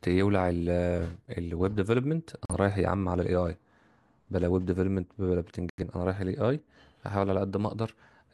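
Speech with two digital broadcast dropouts, at 2.45 to 2.55 s and 5.70 to 5.83 s. The receiver muted on bad frames, leaving blank vertical gaps in the spectrogram and flat silence in the waveform. Each lost stretch fits one and two frames, about 43 ms and 85 ms.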